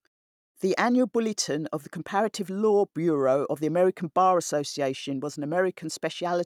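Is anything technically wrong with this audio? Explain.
No, nothing in this speech clip points to a technical fault, and the quiet gaps between phrases sit at silence and give way promptly to the next sound as intended.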